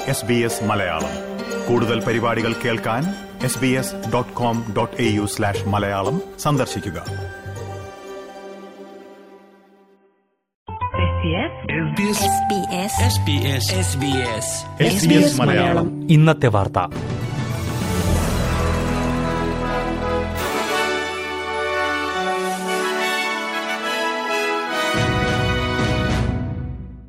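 From 9.97 s to 11.97 s the adaptive stream drops to a lower bitrate, switching down with no gap and back up after two seconds. The sharp loss of detail points to a move from a fuller AAC encoding, around 96 kbit/s, to one near 16 kbit/s. Everything above 3.8 kHz vanishes, so the sound turns dull and watery. On a spectrogram the upper band is abruptly cut off flat at 3.8 kHz for exactly that stretch, while the waveform shows no break.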